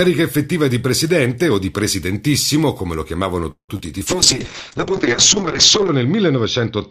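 Right after "presidentissimo come lo chiamavano", from 3.51 to 3.71 s, the speech stops and a gap opens. The last sound is carried on as a fading buzz or hiss. For about 100 ms it goes silent. Then the speech resumes exactly where it left off, with nothing skipped. About 173 ms of delay has been inserted. This is a call audio freeze. The likely cause is packets held up in transit, which drained the jitter buffer.

Soon after, from 3.77 to 3.81 s, there is a short concealed packet loss. About 20 ms of audio never reached the decoder in time. The receiver patched the hole by extending the preceding sound for roughly 18 ms and then blending back into the real signal. It comes across as a brief smear or wobble in the speech, close behind the freeze.

At 4.08 s a call bitrate drop begins and lasts to the end. The encoder falls from 64 kbps to 6 kbps. It stays at that lowest rate for about 1.8 s. 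The bandwidth narrows from 20 kHz to 8 kHz, so the top end disappears. The speech turns muffled, rough and watery. Fine detail and sibilance are lost under the coarse coding.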